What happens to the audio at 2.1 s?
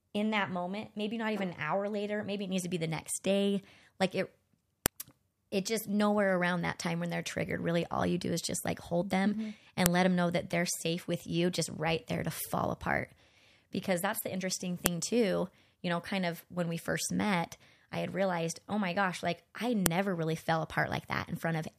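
Nothing goes wrong at 2.1 s: the speech runs on intact there, with no dropout, click, distortion or other fault at that point.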